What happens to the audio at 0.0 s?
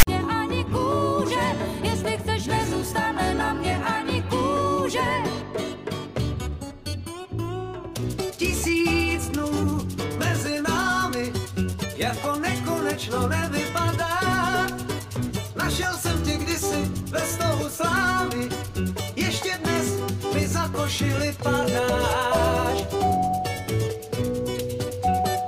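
Right at the start, from 0.0 to about 0.07 s, you get file tags played as audio. The text tag block is being read as samples, so there's a short, loud rasp pushed off to one side with hard edges, then dead silence where the zero padding sits.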